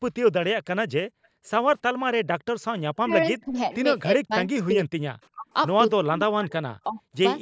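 Between 1.06 and 1.44 s the room background sinks almost to silence, falling by about 39 dB for roughly a third of a second, then returns. It happens again at 1.94 to 2.05 s, dropping about 40 dB. This is background gated by the echo canceller: while the far side played through the loudspeaker, the canceller clamped the microphone down hard.

Inside that first dip, at 1.23 to 1.28 s, a brief, very faint delayed copy of speech slips through, arriving about 352 ms late and far below the main voice. This is an echo leak: the canceller likely failed to remove all of the loudspeaker sound its microphone picked up, and the remainder was sent back.

From 3 s onward the talker's voice repeatedly dips or drops out in pieces: at 3.02 to 3.14 s, 3.36 to 3.73 s, 4.17 to 5.12 s, 5.34 to 5.54 s and 6.05 to 7.0 s. The cuts range from around 25 dB to around 40 dB, and the longest last most of a second. 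This is speech suppressed in double talk. Both sides were likely talking at once, and the canceller turned down the local voice along with the echo.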